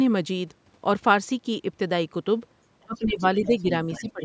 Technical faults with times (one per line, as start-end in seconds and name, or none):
2.85-3.65 speech suppressed in double talk
3.41-3.62 other side's voice leaking through
3.91-4.12 other side's voice leaking through
4.01-4.23 speech suppressed in double talk